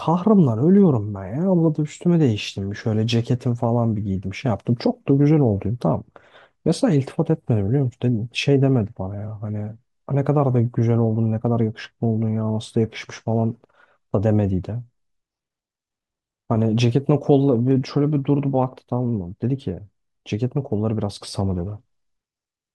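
Nothing technically wrong turns up anywhere in this bit of speech, so there's no time or cause to point to.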